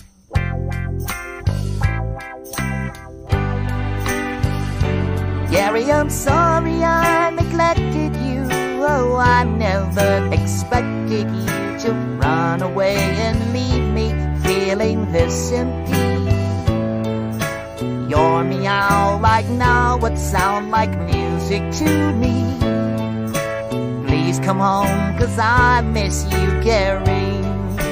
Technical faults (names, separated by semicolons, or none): none